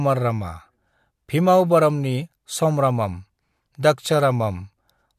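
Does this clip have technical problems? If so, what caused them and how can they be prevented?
No, nothing in this recording points to a technical fault, so there is no cause to trace and nothing to prevent.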